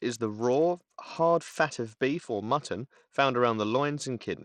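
From start to finish the speech sounds dull and gritty, its treble thinning and flickering while a coarse grainy noise rides on it. The likely cause is Bluetooth SBC compression, with a starved bit pool, fitting roughly 80 kbps, dropping the top sub-bands and crudely quantising the rest.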